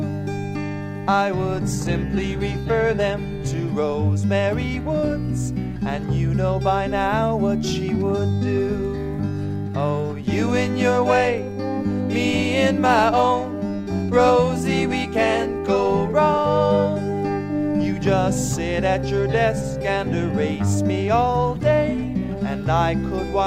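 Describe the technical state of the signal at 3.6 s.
At 3.6 s you're inside a stretch where the adaptive stream dropped to a lower bitrate, running from about 1.76 s to 3.76 s. The player switched versions when the connection slowed, with no gap. The top end is cut off, with nothing above about 14.9 kHz, and the thinner, more artefact-laden texture points to something like a low-rate HE-AAC stream near 20 kbit/s. At 3.76 s quality snaps back just as abruptly.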